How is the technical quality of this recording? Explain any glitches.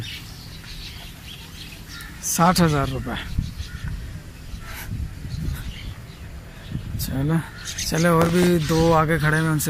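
One glitch stands out: from 8.22 to 8.47 s a gritty burst of crackle tears across the sound. This is processor overload crackle. The processor fell behind, missing about ten short buffers of a few milliseconds over that stretch, and each gap was filled by replaying stale audio with hard edges, so the clicks fuse into a brief tearing noise.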